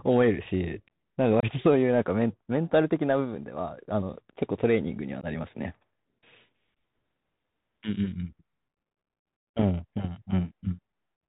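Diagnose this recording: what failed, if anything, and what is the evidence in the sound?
The codec stage failed throughout, in the form of a Bluetooth CVSD headset codec. Nothing reaches above 4 kHz. A granular hiss sits under the speech, s sounds come out scratchy, and loud bright syllables distort where the one-bit delta steps can't climb fast enough. The damage is plainly audible, and it fits a 64 kbps CVSD link. A plain low-pass filter would dull the speech without the grainy noise or the slope-overload distortion.

The radio link also shows unconcealed Bluetooth headset packet loss. The speech drops to silence from 1.40 to 1.45 s for about 26 ms, then again at 5.21 s for 15 ms. Each hole has hard edges and comes back briefly quieter while the CVSD step size rebuilds. The gap lengths suggest several few-millisecond voice packets lost each time, with nothing filled in. A buffer underrun would leave similar holes, but it wouldn't have that soft re-entry.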